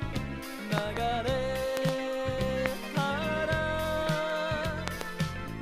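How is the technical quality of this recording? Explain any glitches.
The recording is marred by loud pops, four events in all. Double pops, two in quick succession, fall at 0.78 to 0.99 s, 1.77 to 1.91 s and 4.88 to 5.03 s, and a single pop at 2.66 to 2.68 s. Each peaks at about 20 dB above the sound. A sudden voltage step, likely from a plug, switch, static discharge or driver glitch, was added to the signal and then shaped by the following circuitry into a sharp thump. The sound carries on unbroken underneath, which distinguishes these from dropout clicks, where the audio itself briefly vanishes.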